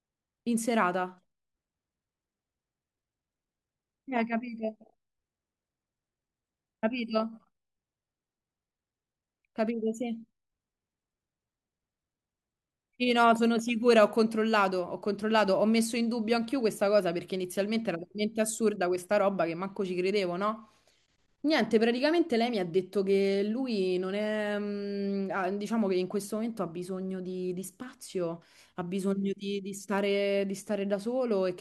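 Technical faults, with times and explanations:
Nothing technical trips up this speech recording; it comes across as intact all the way through, with nothing to flag.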